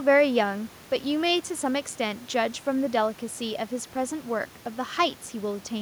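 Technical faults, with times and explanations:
No technical faults can be heard in this speech.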